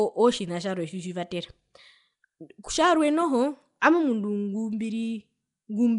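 Nellymoser compression runs through the whole recording, with the speech carrying a rough, hissy halo and a smeared, underwater blur. The likely cause is Flash's Nellymoser Asao codec, coarsely coding short blocks, starving weak bands and filling them with noise. Nothing remains above 10.6 kHz, and the damage suggests a rate near 44 kbps.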